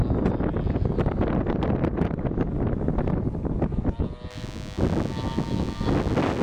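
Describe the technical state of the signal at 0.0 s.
The signal is intact at 0.0 s, with no dropout, distortion or other fault audible at that moment.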